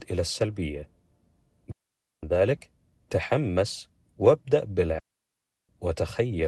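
Digital wireless dropouts at 1.71 to 2.23 s and 4.99 to 5.69 s cut the speech into clean holes of near silence, about 0.51 s and 0.70 s long. The receiver lost too much data and muted with a quick fade, with no noise burst either side.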